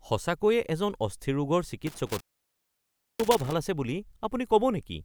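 From 1.87 to 3.53 s the speech suffers an intermittent contact: a loose plug or cable briefly opens, cutting the signal for about 0.99 s. Crackle marks the break edges, and faint hiss remains underneath, unlike the clean, silent gap of a digital dropout.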